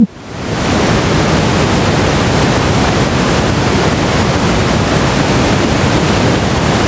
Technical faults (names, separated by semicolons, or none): gain pumping